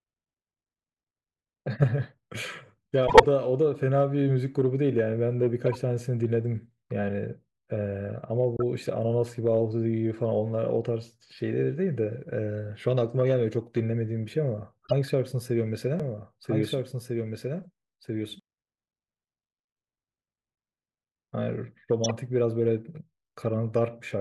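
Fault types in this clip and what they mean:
corrupt frame decoded: Damaged compressed frames were decoded anyway, so energy lands at wrong frequencies as short chirps and noise bursts at 1.82, 3.07–3.26, 5.66–5.78, 8.57–8.63, 14.85–14.93 and 22.04–22.11 s. Spectrograms show brief smears unrelated to the speech, loudest near 3.1 s.
doubled audio track: From 16.0 to 18.4 s a full-band copy of the speech follows about a second and a half behind, a few dB quieter and without decay, likely from a second capture path. Waveforms repeat the same shapes, starting and stopping abruptly.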